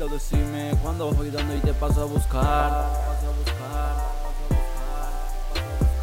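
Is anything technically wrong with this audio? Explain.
Yes. Throughout the clip there is low bit depth without dither, likely from rounding to only about 6 bits with no dither added. The error tracks the signal, leaving grainy distortion around 25 dB below it that shifts with the sound, while quiet passages turn gritty or sputter.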